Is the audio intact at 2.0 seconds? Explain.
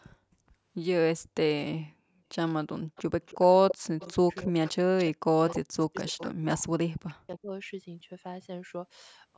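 Yes, the speech at 2.0 seconds is intact, passing through normal call microphone processing with content reaching up to 8 kHz and no fault at that moment.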